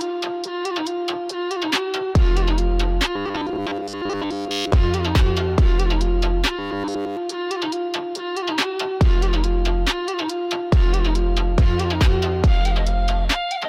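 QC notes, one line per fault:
3.16–4.74 s and 6.59–7.17 s, robotic sound from repeated short buffers. The sound becomes a rigid, metallic buzz at 100 Hz. A 10 ms buffer is likely being replayed while new audio arrives late. In the first span roughly 70 percent of the audio is repeated. In the second, all of it is.
3.51–3.57 s, frames out of order. Two neighbouring 23.2 ms blocks, one frame each, play in swapped order. This gives a brief garbled flutter. No time is lost. It falls inside the first buzzing span.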